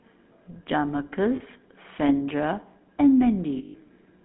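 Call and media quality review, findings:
GSM full-rate codec throughout. Buzzy, gravelly voice, band limited to roughly 200 Hz to 3.6 kHz. Coarse pulse excitation, consistent with 13 kbps full rate.

Lost GSM frames at 1.36–1.41 s (40 ms) and 3.58–3.76 s (160 ms). Metallic ringing hold. Decoder repeats last good frame.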